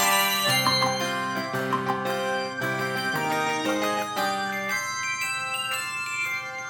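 Throughout, the audio is read two samples at a time (double speed): sample pairs are taken as single frames, so playback runs 2x fast, a full octave high.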